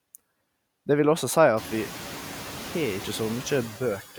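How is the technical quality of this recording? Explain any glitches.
The main glitch is noise suppressor artifacts, present from start to finish. The suppressor pulls down bands it judges to be steady noise, frame by frame, by about 12 dB, so the background dips between phrases and creeps back under the speech. The room noise jumps by about 18 dB around a second and a half in and sits about 17 dB below the speech after that, which gives the suppressor more to chew on.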